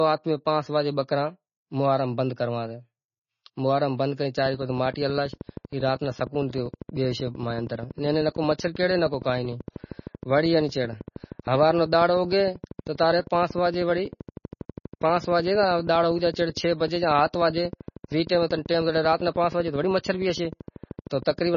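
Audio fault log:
Throughout: MP3 compression. The speech has heavy codec damage, with a watery, swirling texture as weak frequency lines drop in and out between frames, and nothing above 6.9 kHz. The likely cause is MP3 encoding starved of bits, which fits a bitrate around 24 kbps.
4.38 to 21.55 s: train of clicks. A regular ticking runs at 12.8 clicks per second, a couple of hundred in all, peaking about 5 dB above the speech and audible in pauses too. Likely interference from nearby equipment or a faulty connection or power supply.
12.97 s: pre-echo. A short hiss spreads about 13 ms ahead of a sharp attack, softening its onset. The codec has spread quantisation noise sized for the loud attack across the whole block, filling the quiet moment just before it.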